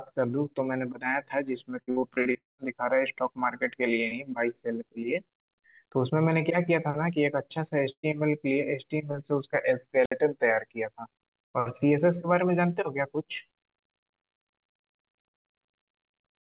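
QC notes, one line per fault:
1.82–2.37 s, repeated packet loss (robotic sound): the speech turns choppy, with six short holes in about half a second, the longest near 58 ms. Each hole is bridged by stretching the sound just before it, so roughly 40 percent of this span is synthetic fill rather than real audio. About 240 ms of speech is gone in total, and the repeated patching gives the clipped, robotic texture.
2.37–2.61 s, long network dropout: straight after the choppy run, the last sound is held briefly, then fades, leaving about 170 ms of near silence before speech returns further along. Roughly 210 ms of audio never plays. The likely cause is the stream stalling long enough that the receiver exhausts what it can invent from the previous sound and simply goes quiet until data arrives again, picking up past the lost part.
7.92–8.06 s, burst of packet loss: a brief held buzz or fading hiss, then about 90 ms of silence, and the speech resumes with around 120 ms missing. 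A short run of audio failed to arrive in time, so the receiver extended the preceding sound and turned it down as the gap continued. Because playback skips ahead rather than waiting, the lost stretch leaves a small jump in the speech.
9.98–10.13 s, wireless microphone squelch dropout: a quick rise of hiss or static, then a hole of near silence lasting about 61 ms, then speech coming back. This is the radio link from an FM microphone weakening until the receiver's squelch mutes the output rather than pass pure noise. It reopens once the signal recovers, within the same band-limited G.711 call audio that has nothing above 4 kHz.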